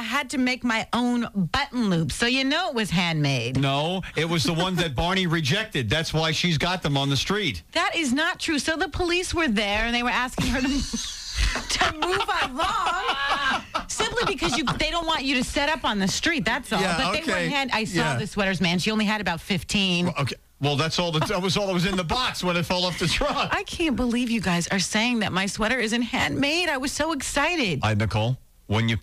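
A train of clicks runs from 15.03 to 16.10 s: about seven near-identical pops at roughly 5.6 per second, unevenly spaced, peaking about 5 dB above the sound and ticking through pauses too, likely from nearby equipment interference. Their matching shape separates them from random crackle.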